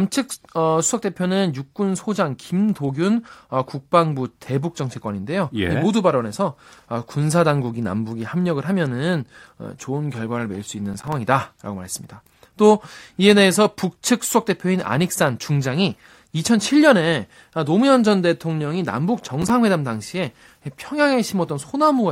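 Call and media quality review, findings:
Processor overload crackle in the speech at 10.94–11.13 s and 19.20–19.50 s: short gritty bursts made of tiny silent gaps. Sounds like a handful of missed deadlines on small buffers of about 5 ms, so probably a CPU load spike in the audio processing path.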